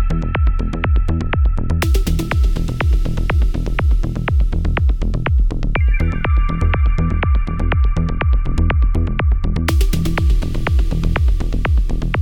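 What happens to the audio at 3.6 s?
Nothing goes wrong at 3.6 s; the audio plays through that moment intact, with no dropout, click or distortion.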